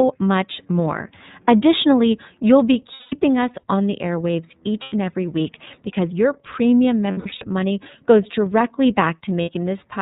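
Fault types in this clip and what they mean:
iLBC codec: A narrowband voice codec removes everything above 4 kHz. The speech sounds plainly rough and synthetic, consistent with 30 ms frames at 13.33 kbps.
lost iLBC frames: The decoder covers missing packets by repeating the last pitch cycle mixed with noise. Four brief gaps sound like held, buzzy vowels, and speech recovers immediately.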